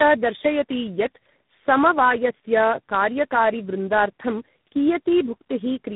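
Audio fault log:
throughout: tandem speech coding. The speech is rough, muffled and warbly, which fits three speech codecs in a row (GSM, AMR-NB, G.726), each re-coding the previous one's damage. A spectrogram shows nothing above 3.8 kHz and smeared, blotchy harmonics.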